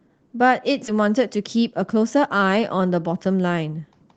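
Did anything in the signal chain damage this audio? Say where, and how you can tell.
Yes. At 0.87 s the speech shows a skip ahead in the network and jitter buffer stage. Roughly 0.4 s of audio is missing, and the two sides are joined with no gap. A late stretch was discarded so playback could catch up.

From 0.99 s to 2.43 s the jitter buffer speeds up. The speech runs at 110 percent, with its pitch unchanged, so it sounds hurried. The buffer trimmed short pitch-period pieces over and over, shedding roughly 150 ms of excess delay.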